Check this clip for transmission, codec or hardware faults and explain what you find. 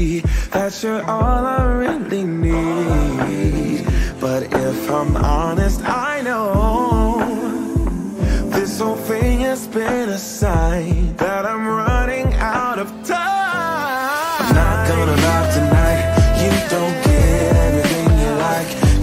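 No faults found here.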